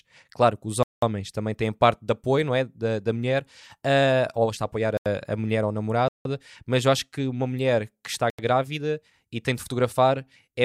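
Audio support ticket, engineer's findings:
Block of digital silence in the speech: hard cuts to nothing at 0.83–1.02 s (193 ms), 4.97–5.06 s (85 ms, after "ou está a apoiar"), 6.08–6.25 s (171 ms, after "a mulher ou a") and 8.30–8.39 s (85 ms, after "uma mulher que está"). The 85 and 171 ms lengths fit whole 4096-sample buffers left unfilled. There is no fade, unlike a concealed network dropout.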